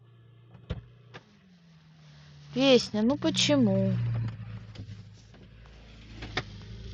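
Bluetooth SBC bit pool drop from 0.79 to 3.41 s and again from 6.29 s to the end: the link starved the top sub-bands, so the speech turns dull and gritty, consistent with roughly 72 kbps.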